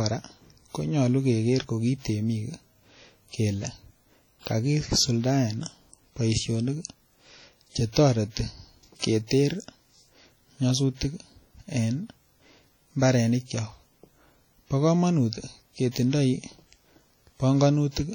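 WMA compression throughout: the speech rings and sounds washy, with hiss that breathes alongside it, likely from a transform codec squeezed to roughly 32 kbps, zeroing weaker detail.

Pre-echo from 8.99 to 9.02 s: a brief hiss runs about 37 ms ahead of a sharp attack, because quantisation noise sized for the loud onset spreads across the quiet moment before it.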